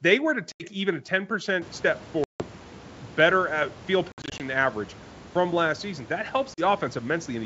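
Speech over a wideband telephone link shows packet loss on an ADPCM call as hard silent gaps: 0.52–0.64 s between "were to" and "even a" (80 ms lost), 2.24–2.43 s (160 ms), 4.12–4.42 s after "better at field" (140 ms scattered in bursts up to 60 ms), and 6.54–6.62 s (40 ms). The waveform drops abruptly to flat silence, and the spectrogram shows clean vertical blank columns. Speech returns slightly distorted after each gap while the decoder's predictor and step size resynchronise.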